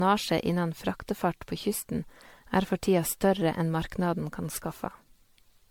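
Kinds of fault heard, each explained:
Generation loss: The speech sounds swirly, smeared and hollow all the way through, more than one pass at a moderate bitrate would explain. Consonant attacks are blurred. The likely cause is repeated lossy re-encoding. Each pass quantises again on a shifted frame grid, so noise and spectral holes build up. The character points to MP3 at around 96 kbit/s, encoded roughly ten times over. Nothing is present above about 19.9 kHz.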